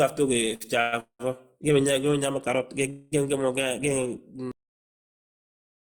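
At 0.55 to 0.66 s there is a short stall from a late packet. A packet missed its slot and the jitter buffer ran dry. The last sound is held for about 49 ms with a faint buzz or dip, then speech resumes where it left off. Nothing is lost.

Call audio freezes follow at 0.81 to 0.94 s, 1.00 to 1.21 s and 2.90 to 3.14 s. In each one a held, fading buzz or hiss fills the gap: about 110 ms, 192 ms and 215 ms. The middle freeze also drops to silence for about 100 ms. The likely cause is packets delayed in transit. Speech then continues without loss.

At 4.52 s the audio has a cut-off end. It stops mid-sound and falls straight to digital silence, with no decay. The final buffers were never written or played, so nothing is heard after this point.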